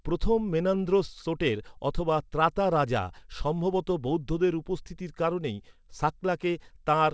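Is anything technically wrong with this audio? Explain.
No, nothing technically wrong can be heard here.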